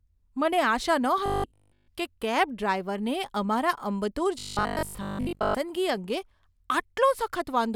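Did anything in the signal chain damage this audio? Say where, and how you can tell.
Yes, at the driver or buffer stage: robotic sound from repeated short buffers. From 1.26 to 1.88 s, just before "કે કેબ ડ્રાઈવરને અમારા", and again from 4.39 to 5.55 s, speech becomes a rigid 50 Hz buzz. That fits a 20 ms chunk looped while real audio is skipped, likely from buffer underruns.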